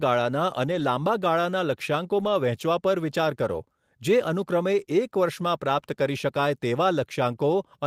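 At 0.67 to 0.81 s, just before "લાંબા ગાળાના", and again at 2.19 to 2.29 s, between "લાંબા ગાળાના" and "વહેંચવા પર વિચાર કરો", the speech turns briefly rough and noisy: lost packets rebuilt from error correction. The lost stretches, fitting runs of about four and three 20 ms packets, were filled from low-bitrate copies in later packets. There is no silence. On a spectrogram, harmonics there look smeared and grainy; the waveform stays continuous.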